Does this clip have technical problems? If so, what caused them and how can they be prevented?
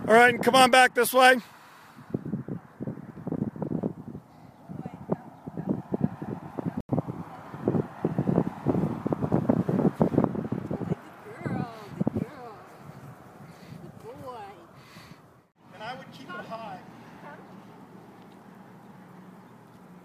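Yes, there's a block of digital silence from 6.81 to 6.89 s, a short hole of about 85 ms that fits a 4096-sample block. Either the output buffer wasn't filled in time or a calculation produced invalid numbers. Larger buffers and guarding against invalid values would prevent it.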